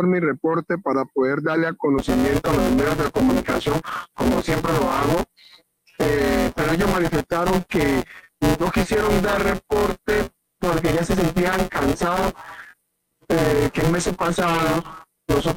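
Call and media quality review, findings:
Buffer tearing, 1.98 s to end. Continuous robotic buzz at 172 Hz, present only when there is signal. This fits a 256-sample ring buffer whose write and read pointers have slipped. About a third of each period replays audio roughly 10 ms stale, with hard splices. Unlike underruns, there are no silent gaps or sporadic clicks: it is a steady rattle locked to the buffer rate.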